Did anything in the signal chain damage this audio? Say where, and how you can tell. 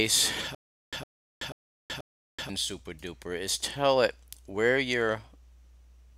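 Yes, there's a stutter with silent gaps from 0.55 to 2.49 s: a 109 ms burst repeats four times, with 378 ms of silence between, every 486 ms. That's likely a playback or stream stall replaying its last fragment on each retry, and the intended audio is lost.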